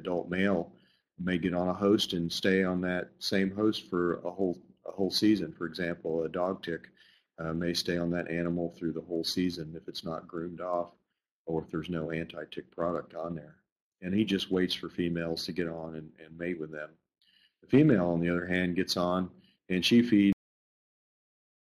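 At 20.33 s the audio has a cut-off end: the last buffers were never written, so the sound stops mid-event and falls straight to digital silence for the remaining 1.35 s. Unlike a fade-out or natural ending, there is no decay or tail.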